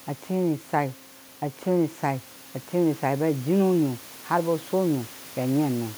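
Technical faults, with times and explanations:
No technical faults heard.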